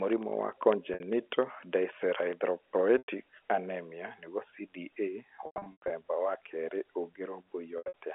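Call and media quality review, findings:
Periodic USB or driver dropouts, 0.13 to 2.33 s: regular ticks every 0.1 s, about twenty in all. Each is a sub-millisecond gap filled with silence. Points to a background task stalling the USB audio path or driver on a fixed timer. Audible only over signal.

Packet loss with pitch repetition, four events. Receiver concealment repeats the last pitch period, then fades it out.
0.94 to 1.00 s: 60 ms gap, fits about three 20 ms packets. Brief held, buzzy tone.
2.98 to 3.05 s: 100 ms gap. Held tone decays toward silence, then cross-fades back.
5.46 to 5.90 s: 300 ms lost in scattered bursts over 440 ms, longest 100 ms. Repeated stutter and buzz just before "wa kerĩ".
7.78 to 7.93 s: 140 ms lost over 160 ms, longest run 80 ms. Buzzy hold fading to silence.
Probable component: network jitter or loss upstream of the decoder. The G.711 A-law telephone band of 300 Hz to 3.4 kHz is audible under the concealment.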